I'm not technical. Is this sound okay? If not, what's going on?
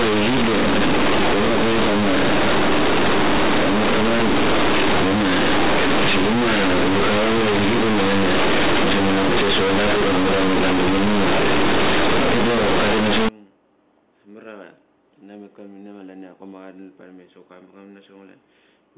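No. For the first 13.29 seconds, the system hands telephone-coded speech to the player without unpacking it. This is companded audio read as linear. The telephone format stores sound on a squeezed scale, so those bytes should be expanded first. Played raw, every tiny wobble jumps across about half the full range. Quiet moments blow up to full loudness, and the speech comes out as harsh, very loud buzzing, with strong hiss where pauses should be. After 13.29 seconds it is correctly unpacked and sounds like ordinary narrow telephone speech.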